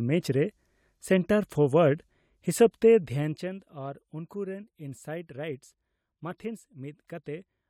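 From 3.0 to 3.64 s the speech level drops by roughly 15 dB with zipper noise: the gain moves in unsmoothed 1 dB steps, around twenty a second, and each jump leaves a small click, producing an audible ticking that rides on the voice during the fade.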